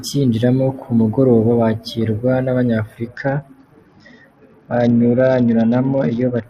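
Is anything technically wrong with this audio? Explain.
Yes. From 3.08 s to 6.46 s the speech suffers a Bluetooth SBC bit pool drop. The link gets congested, and the encoder cuts its bit budget sharply. That fits a fall from bit pool 28 to 8, near 72 kbps. Upper sub-bands starve, treble dulls, and gritty quantisation noise rises.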